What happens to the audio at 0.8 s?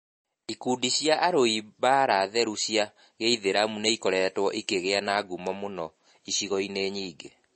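At 0.8 s, as throughout the clip, the speech shows the marks of likely MP3 compression at a starved bitrate, which fits around 32 kbps. The encoder has cut everything above 8.3 kHz and drops weak frequency lines frame by frame, so the speech sounds dull, watery and swirly, with smeared onsets.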